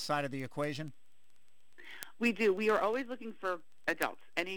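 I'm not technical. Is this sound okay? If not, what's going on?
No, there's a problem. From about 0.16 s right through to the end, there's a steady run of sharp ticks, roughly every 0.07 s, some louder than others. That's word clock ticks: two pieces of digital gear are passing audio between them, each keeping its own time, and they disagree slightly. Every time they drift a step apart, a single sample gets dropped or doubled, and you hear a tick.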